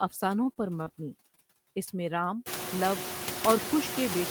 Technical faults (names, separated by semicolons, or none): noise suppressor artifacts; repeated packet loss (robotic sound); short concealed packet loss